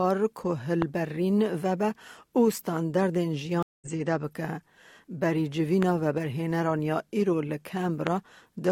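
A sudden voltage pulse, likely from a plug, switch, static discharge or driver glitch, lands on the signal at 0.82 to 0.84 s, producing a loud pop roughly 15 dB above the surrounding sound, which carries on underneath the sharp click.

At 3.63 s the connection drops and the player falls silent for about 0.19 s. This is a stream reconnect. A fresh decoder restarts mid-stream at 3.87 s, so the audio resumes roughly a fifth of a second further on, with a jump in the sound.

The same kind of voltage spike likely hits again at 5.83 to 5.85 s and at 8.07 to 8.09 s. Each is a single loud pop, again about 15 dB above the signal, sitting on top of sound that continues uninterrupted beneath it.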